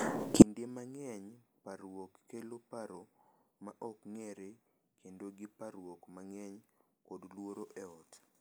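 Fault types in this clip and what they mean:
One channel inverted: one stereo channel has likely had its polarity flipped, so when the two channels are summed to mono the shared centre content cancels. From 0.42 s onward the speech drops by about 35 dB, leaving only a faint residue.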